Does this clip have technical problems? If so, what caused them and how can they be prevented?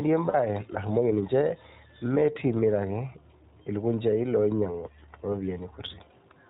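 Yes. The whole clip runs through the iLBC codec. Nothing above 4 kHz gets through, and the speech has that slightly rough, synthetic edge, which fits iLBC's 15.2 kbps mode with 20 ms frames. To prevent it, use a wideband codec like Opus when both ends support it.

There are also lost iLBC frames from 0.30 to 0.35 s, just before "narumoki ninje". The decoder filled the gap by repeating the last pitch cycle with noise, so you hear a brief buzzy, held vowel, which fits two lost 20 ms frames. Because each frame stands alone, the speech snaps back right away. Better network QoS or forward error correction would prevent it.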